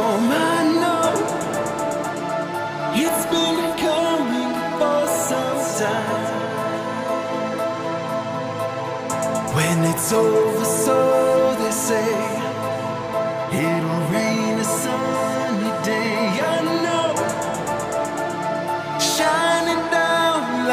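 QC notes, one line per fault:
Nothing here caught my ear as a problem; the whole thing sounds just as it should.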